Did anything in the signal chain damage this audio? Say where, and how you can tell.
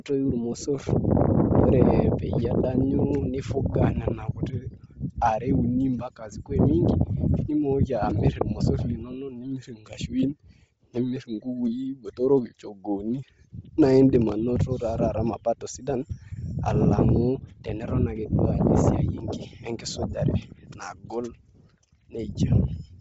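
Yes. Bluetooth LC3 compression damages the whole clip at the codec stage. Nothing is above 7.7 kHz, and the speech has grainy, breathy highs, likely from low-bitrate LC3 zeroing and noise-filling the upper spectrum.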